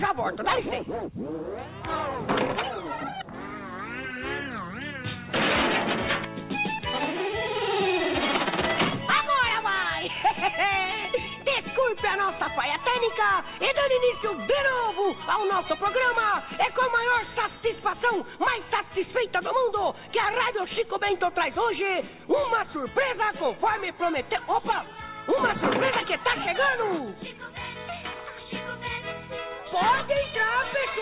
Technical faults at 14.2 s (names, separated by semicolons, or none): short concealed packet loss